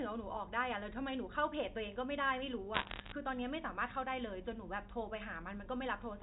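From 2.74 to 3.12 s, bit errors on a digital phone line scatter sharp ticks over the speech, fitting an error rate somewhat under one percent. Each flipped bit corrupts a single sample, so unlike packet loss there are no gaps: the speech runs on unbroken under the crackle.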